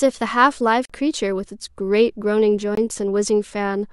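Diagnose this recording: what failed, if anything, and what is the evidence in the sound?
Output buffers at the driver stage apparently went unfilled, leaving blocks of digital silence at 0.85–0.90 s and 2.75–2.77 s: abrupt 43 and 21 ms holes, cutting out and back with no fade.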